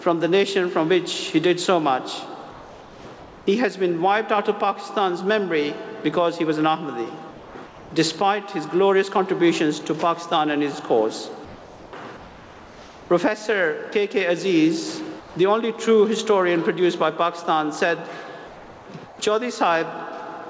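Comfort noise replaces the background in five pauses, at 2.51 to 3.47 s, 7.31 to 7.91 s, 11.45 to 13.10 s, 15.20 to 15.35 s and 18.47 to 19.19 s. In each, the real background gives way to a smoother synthetic hiss. At 15.2 s the background sits about 20 dB below the loud parts and the fill drops it by about 6 dB more. The likely cause is discontinuous transmission: the sender stops sending while its detector hears nothing, and the receiver generates stand-in noise. The call path sounds like G.722, with nothing above 8 kHz.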